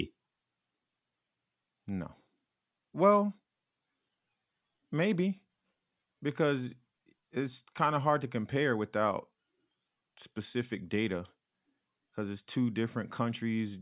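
No technical faults can be heard anywhere in the recording.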